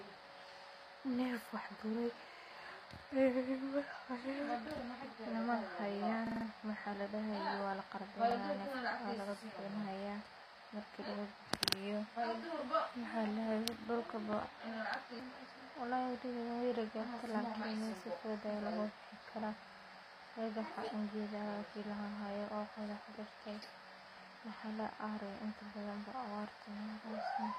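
Throughout, the speech carries plainly audible codec damage and nothing above 15.5 kHz, likely HE-AAC compression, with treble rebuilt by band replication rather than coded.

A repeated buffer stutters at 2.32–2.51 s and 6.27–6.46 s (four extra plays each), 8.31–8.36 s (one) and 11.66–11.75 s (two). Each 46 ms piece replays with hard joins, which fits a 2048-sample buffer.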